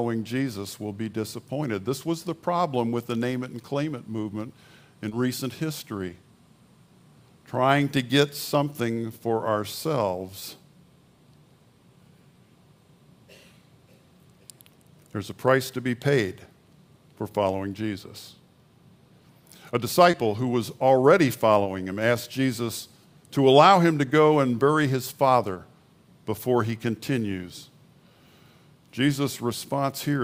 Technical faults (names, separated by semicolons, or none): short concealed packet loss